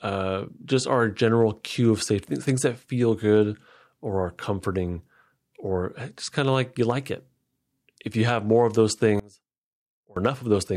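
It's a speech recording, and it holds up until right after "have more of those," where from about 9.20 to 10.17 s the voice suddenly drops by about 25 dB. That collapse is most likely one channel inverted: with one side's polarity flipped, the centred voice and low end cancel when the channels are summed to mono, leaving only the faint difference between left and right for nearly a second.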